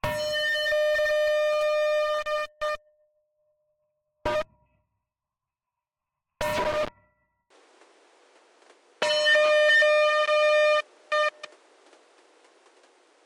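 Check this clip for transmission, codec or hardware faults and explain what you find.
One fault appears. From 7.50 s to the end, the sound abruptly turns duller, with nothing above 11.4 kHz, a level shift of about 5 dB and a faint new background noise, with no gap at the change. The likely cause is an input switched to a poorer device, whose narrower band, different gain and own noise replace the original microphone's.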